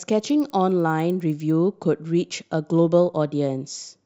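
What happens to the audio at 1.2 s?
At 1.2 s the speech is inside a stretch from 0.0 to 1.5 s where the resampler restarted on every block. The converter, which appears to be upsampling by two, treated each 100 ms block separately, so every block edge was computed against missing neighbours. The result is a tick train at 10 per second under the speech, shown on a spectrogram as faint vertical lines every 0.1 s and on the waveform as small kinks at the block boundaries.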